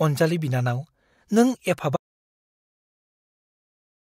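The input feeding this speech recording was most likely lost partway through, through a disconnected device, a failed link or an accidental mute, while the recorder kept writing silence. The result is an audio dropout to silence: at 1.96 s the speech cuts off abruptly mid-flow, and from there to the end of the clip there is total silence with no room tone at all. Anything spoken after that point is gone.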